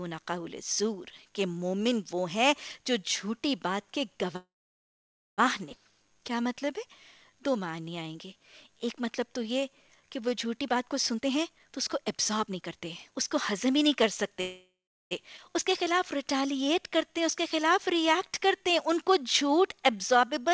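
A call audio freeze runs from 4.36 to 5.40 s. The sound stops moving forward for about 1.02 s. The last fragment is stretched into a fading buzz, and roughly 0.89 s of that is silence. The likely cause is delayed packets draining the jitter buffer. When playback resumes, it picks up where it left off, so a pause has been inserted but nothing has been lost.

A skip ahead follows at 5.72 to 5.75 s. About 0.7 s of audio is simply gone. The two sides are butted together with only a tiny fill between them. A stretch of audio was dropped while later audio was already waiting, so the sound lurches forward abruptly.

A jitter buffer slow-down covers 5.91 to 10.58 s. Playback runs at 90% speed and adds 450 ms in total. The receiver repeats single pitch periods and bits of pauses to rebuild its reserve. Pitch stays put, but sounds are drawn out and can take on a faint warble.

A jitter buffer speed-up takes over from 10.60 to 14.40 s at 117% speed. 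It trims roughly 0.7 s by cutting out short pitch-period chunks again and again. Pitch is unchanged, but the sound feels hurried and compressed in time.

A second call audio freeze sits at 14.41 to 15.13 s. It holds for 0.70 s, including about 0.34 s of silence, and then continues from where it stopped.

The second skip ahead at 15.37 to 15.40 s drops about half a second and joins the edges almost directly.

A final jitter buffer slow-down runs from 15.70 to 20.50 s at 93% speed and adds 335 ms of stretched, same-pitch sound.

Throughout, nothing is audible above 8 kHz. This fits a wideband call codec such as G.722 at 64 kbps.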